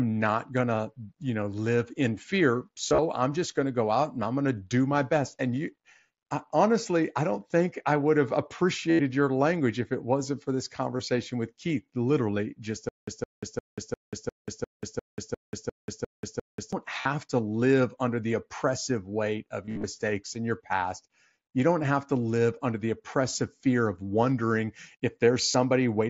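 Speech over a Bluetooth headset link, with the wideband mSBC codec adding light graininess on loud syllables. Concealed Bluetooth headset packet loss shows up at 2.89, 8.91 (between "think I would have" and "your language if it"), 10.97 (after "it wasn't for this"), 17.01, 19.65 and 25.51 s. Each time, the receiver patches the gap by repeating a recent stretch of waveform. The short ones lose around 20 to 50 ms. The 8.91 s gap is about 80 ms and turns buzzy. The 19.65 s one is worst, with about 135 ms lost across 180 ms, so you get a held buzz and a warble as the real audio returns. Then from 12.89 to 16.73 s, right after "literally just", there's a stutter with silent gaps. A 164 ms fragment plays 11 times, each followed by about 187 ms of dead silence, so it repeats every 351 ms. That's likely a stalled stream retrying, and whatever should have played there is gone.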